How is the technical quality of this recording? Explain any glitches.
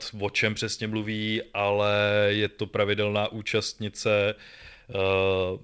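The technical quality of this recording holds up, and there are no glitches to explain.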